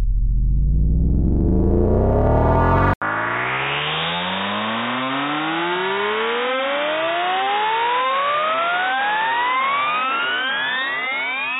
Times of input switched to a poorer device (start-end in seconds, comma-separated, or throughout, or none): 2.94-11.59